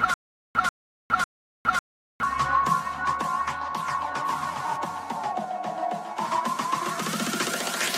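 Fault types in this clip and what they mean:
Stutter with silent gaps: From the very start of the clip until about 2.23 s, the same short burst of about 139 ms plays again and again. Each burst is followed by about 411 ms of dead digital silence. The pattern repeats every 550 ms, three times over. The cause is likely a stalled player or stream replaying its last fragment at each retry and then running empty. The audio meant for those gaps is lost.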